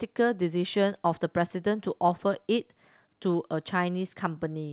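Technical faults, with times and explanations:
No technical faults; the speech passes over the WebRTC call path with nothing above 4 kHz, which fits a narrowband G.711 A-law link at 64 kbps.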